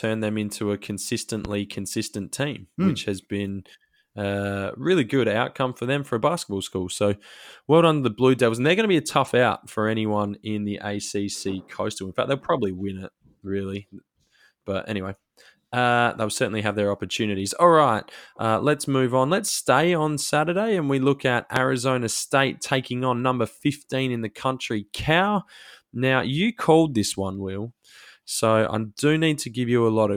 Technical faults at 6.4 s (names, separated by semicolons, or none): none